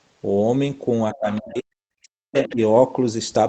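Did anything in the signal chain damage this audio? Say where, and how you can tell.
Yes. In call processing, the other side's voice leaks through at 1.12–1.41 s and 2.34–2.56 s, about 15–20 dB under the talker. It is likely residual echo the canceller missed, and it shows on a spectrogram as faint harmonic traces.

Speech is suppressed in double talk from 1.14 to 2.59 s, with dips as deep as about 40 dB. It is likely the canceller ducking both voices, which appears as waveform troughs.

A skip ahead at 1.55 s, in the network or jitter buffer, drops about half a second. The waveform splices both sides directly together with no silent gap, so the spectrogram shows an abrupt seam.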